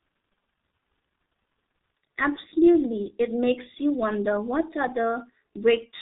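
Speech runs through the G.723.1 codec for its whole length, heavily damaged. Nothing above 4 kHz survives, so it sounds muffled and hoarse. Consonants blur, as at about 6 kbit/s.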